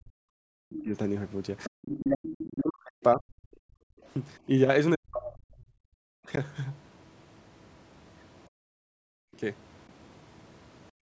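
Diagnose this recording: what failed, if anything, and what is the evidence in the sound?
The failures are all at the call-processing stage, in the echo canceller. The speech gets pushed down in two stretches, 0.0 to 3.24 s and 4.47 to 6.39 s, dipping by as much as about 40 dB. The first run loses roughly two seconds of the talker and the second under a second. That's most likely speech suppressed in double talk. The canceller couldn't tell the near talker from the loudspeaker echo while both were active, so it clamped down on everything.

Overlapping that first stretch, from 0.75 to 2.46 s, there's a second voice sitting roughly 20 dB under the main speech. It's most likely the other side's voice leaking through. The far end was playing on the talker's loudspeaker, the microphone picked it up, and the canceller didn't subtract all of it. That would also explain why the suppressor was getting confused right there.

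Then there's background gated by the echo canceller, where the room tone drops out by about 38 to 40 dB at 3.52 to 4.04 s, 5.98 to 6.06 s, 8.48 to 9.34 s and from 10.91 s to the end. Each time the loudspeaker side was active, the canceller slammed the mic gain down hard and let go afterwards, so the ambience vanishes and snaps back. The call microphone processing itself shows up only as a bandwidth ceiling, with nothing above 8 kHz.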